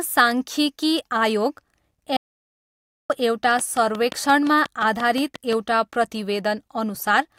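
At 2.17 s the speech cuts to total silence, with no room tone, until 3.10 s. This audio dropout to silence loses about 0.93 s, likely from a lost input link.

From 3.59 to 5.54 s a train of clicks ticks over the speech. Around ten sharp pulses arrive regularly, 5.7 per second, standing well above the speech.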